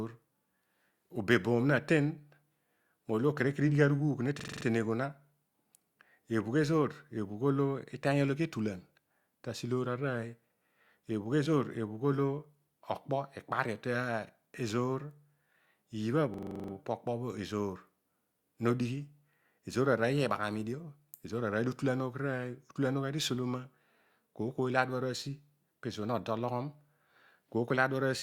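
A rapid machine-gun stutter interrupts the speech from 4.40 to 4.65 s and from 16.34 to 16.73 s. This is a system hang loop: a 42.7 ms slice, consistent with a 2048-sample buffer, repeats at 23.4 Hz while the system stalls, then resumes without audible loss.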